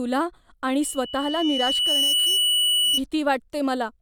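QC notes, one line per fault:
0.81–3.01 s: loudspeaker feedback squeal, a 3 kHz tone swelling over roughly one and a half seconds to about 5 dB above the speech as the mic–speaker loop gain exceeds unity.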